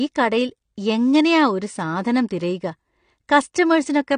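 Speech, with plainly audible codec damage throughout: nothing above 9.7 kHz, and dull, smeared sibilants with a fizzy texture, likely from AAC compression at a low bitrate around 32 kbps.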